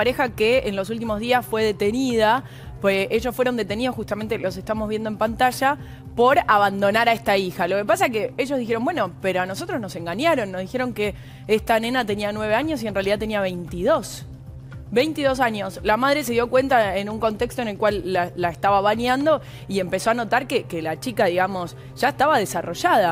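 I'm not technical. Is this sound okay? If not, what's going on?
Yes, nothing stood out as a problem when listening to this one.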